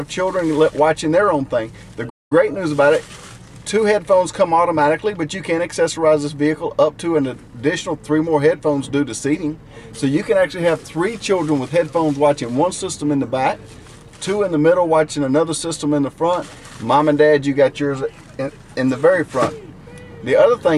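At 2.09 s the sound cuts out abruptly in mid-flow and the output stays silent until 2.32 s, a gap of about 0.21 s, before picking up again. This is a playback stall. The likely cause is that the player briefly ran short of data, or its playback thread was held up. With nothing to send to the output, it produced silence until the supply recovered and playback could continue.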